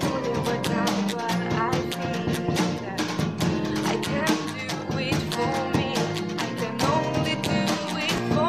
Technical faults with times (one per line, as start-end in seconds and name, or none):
8.16-8.18 chunks out of order